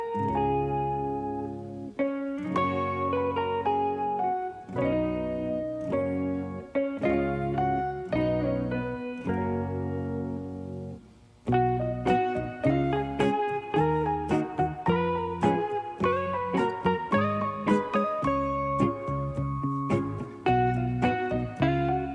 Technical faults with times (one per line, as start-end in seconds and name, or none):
none